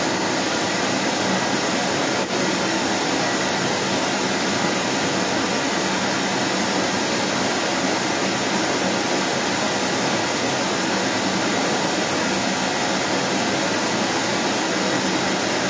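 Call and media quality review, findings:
Second voice audible under the talker for the whole clip, strong, around 10 dB above the speech. Other side's voice leaking through; likely residual echo, far-end loudspeaker playback reaching the microphone, with the echo canceller not removing it. Call microphone processing band-limited at 8 kHz.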